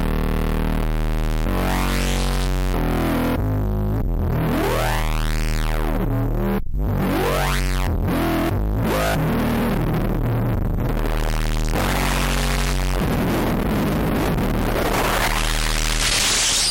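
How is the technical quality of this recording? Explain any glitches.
No technical faults can be heard in this recording of sounds. Nothing interrupts or distorts the audio at any point.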